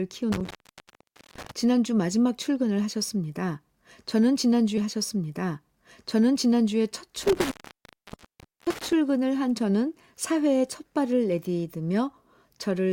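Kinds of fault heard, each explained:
Intermittent contact: A loose cable or plug briefly breaks the signal path. The speech cuts out twice, for about 0.85 s and 1.16 s, with crackle at each edge.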